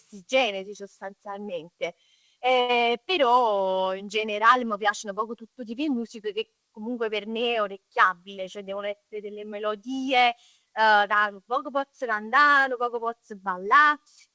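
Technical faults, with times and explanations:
2.61 to 2.84 s, short stall from a late packet: a packet arrived late and the jitter buffer ran dry, so the receiver stretched the last sound by about 81 ms, then picked up where it left off. Nothing's lost, just a held sound with a slight buzz or dip, sitting under the 8 kHz ceiling that fits a G.722 call path.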